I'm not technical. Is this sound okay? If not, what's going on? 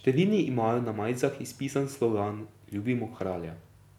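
Yes, this recording sounds fine, with nothing wrong here.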